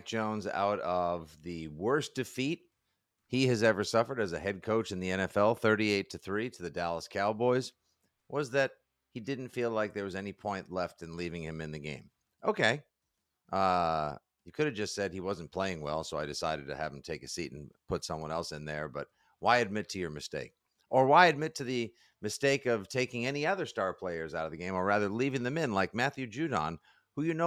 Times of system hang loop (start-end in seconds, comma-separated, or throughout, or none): none